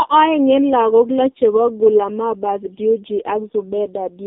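From start to finish the speech has been through an AMR narrowband mobile codec, and it's heavily damaged. Everything above about 3.6 kHz is gone and the low end stops around 200 Hz, so it has that boxed-in phone-line sound. The codec rebuilds the voice from a vocal-tract model and a few pulses per frame, and here the buzzy, synthetic texture points to one of AMR-NB's lowest modes, around 5 kbps.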